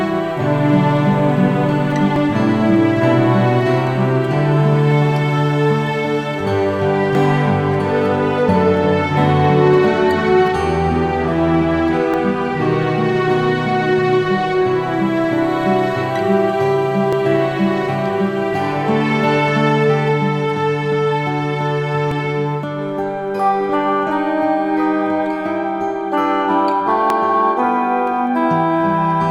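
At 2.16, 7.15, 12.14, 17.13, 22.11 and 27.10 s the sound skips forward by about 10 ms, every 5 seconds. The likely cause is audio missing between chunks. Each joint shows as a sudden waveform step and a thin vertical line on the spectrogram.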